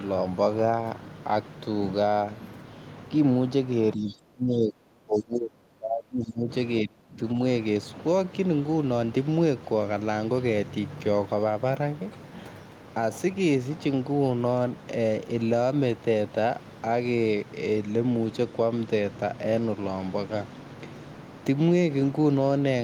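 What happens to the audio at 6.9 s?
From 6.85 to 7.19 s the speech drops out sharply, falling by roughly 30 dB at its deepest, so over about a third of a second the talker dips. This is speech suppressed in double talk. The likely cause is that both ends were talking at once, and the echo canceller could not tell this talker apart from the returning loudspeaker echo, so it attenuated everything it was hearing, including the wanted speech.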